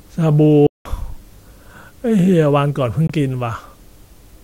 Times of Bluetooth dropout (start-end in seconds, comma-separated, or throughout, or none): 0.67-0.86, 3.07-3.10